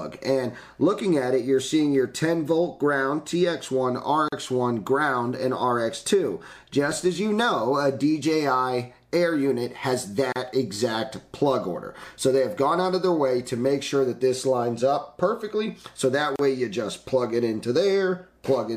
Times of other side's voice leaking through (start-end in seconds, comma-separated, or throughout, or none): none